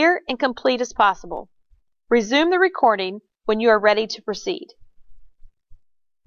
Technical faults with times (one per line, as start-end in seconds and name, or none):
none